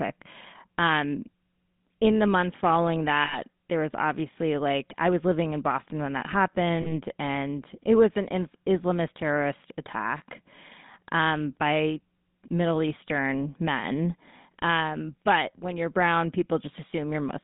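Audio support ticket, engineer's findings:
GSM full-rate codec, whole clip: buzzy, gravelly roughness on the speech, plainly audible. Band limited to roughly 150 Hz–3.7 kHz, so narrowband phone line. Vocal-tract model driven by coarse, regularly spaced pulse excitation, which gives that grit; sound fits the 13 kbps full-rate mode.

Lost GSM frames, 3.24–3.38 s, after "in the months following", before "there was obviously like": metallic ring, sound held. Decoder repeating last good frame's parameters. About 80 ms of audio missing.

Lost GSM frames, 6.82–6.92 s, after "when that", before "and it was an": shorter rough, ringing hold, about 40 ms concealed. Same mechanism: last good frame replayed, too brief to reach silence.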